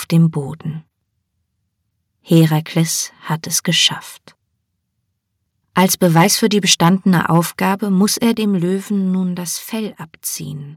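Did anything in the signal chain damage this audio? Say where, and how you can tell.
Yes. Microphone overload at 2.33–2.44 s, 2.77–2.80 s just before "hat es geschafft", and 5.77–7.39 s before "muss er dem", with peaks about 3, 1 and 7 dB past the converter's limit, likely from excessive input gain. The waveform shows flat-topped peaks, and the spectrogram shows harsh broadband streaks.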